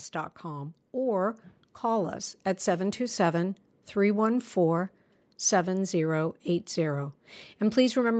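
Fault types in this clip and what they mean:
Automatic gain rising: the gain control found the input too quiet. From 0.13 to 2.26 s, speech and background swell together by about 6 dB.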